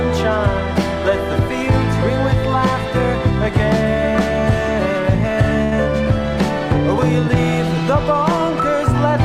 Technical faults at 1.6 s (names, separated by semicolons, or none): none